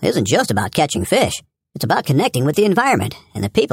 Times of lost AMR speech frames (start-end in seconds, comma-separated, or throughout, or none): none